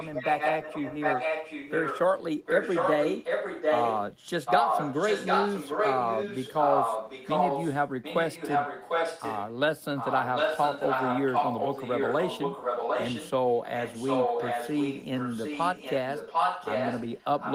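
A delayed second copy of the speech, about 0.75 s late and roughly as loud as the original, runs from 0.0 to 2.0 s, 2.45 to 4.03 s, 4.45 to 7.83 s, 8.02 to 9.58 s, 9.97 to 13.31 s, and 13.48 s to the end, quieter in that last stretch. This is an echo leak, likely from a loudspeaker-side echo canceller passing its pickup back.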